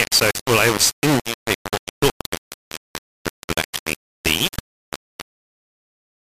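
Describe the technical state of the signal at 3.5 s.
At 3.5 s the speech carries heavy grainy distortion from low bit depth without dither, present throughout the clip. The likely cause is rounding to about 3 bits, so the error tracks the signal, sitting only a few dB below it, and quiet passages sputter or drop out.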